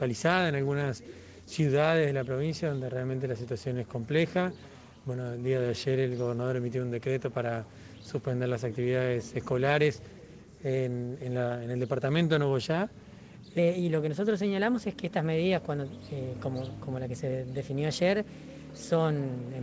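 A section at the wrong speed runs from 13.58 s to the end, playing 1.12 times fast and about two semitones high, likely from playback on the wrong clock. Throughout, nothing is heard above 8 kHz, which fits a G.722 call codec.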